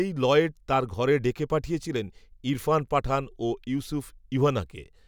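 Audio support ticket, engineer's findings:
No fault found in the speech audio on this ticket.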